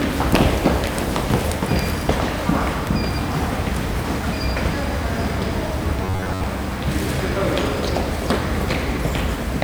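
A recording of everyday sounds with robotic sound from repeated short buffers between 6.04 and 6.44 s, where the audio becomes a rigid, metallic 93.8 Hz buzz. Most of that stretch is likely a roughly 10.7 ms buffer replayed while fresh audio failed to arrive.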